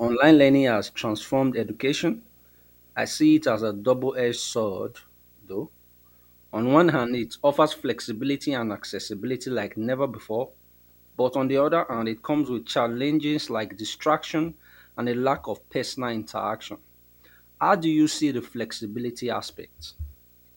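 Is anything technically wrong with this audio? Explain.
Yes. Video or display buzz runs through the whole clip. A screen or video cable is coupling interference into the audio path, so the picture's timing leaks in as sound: a buzz at the 59.94 Hz field rate with a gritty hash riding above it, plus a thin, very high whine at 15.7 kHz from the line rate. It sits roughly 35 dB below the speech, quiet but constant beneath it.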